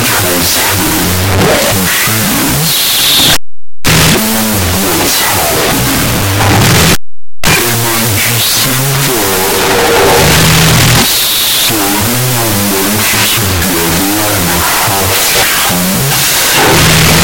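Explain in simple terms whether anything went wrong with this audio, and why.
The recording was saved with two bytes per sample but played back as if each byte were a separate sample, a wrong sample width. For the entire clip, the speech is buried under loud noise and plays at half speed, an octave lower.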